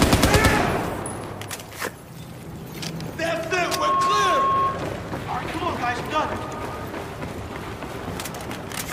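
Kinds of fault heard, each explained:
Loudspeaker feedback squeal: a mic-to-speaker loop running away at 1.1 kHz, swelling over about a third of a second from 3.61 s; spectrogram shows one bright horizontal line until 4.98 s.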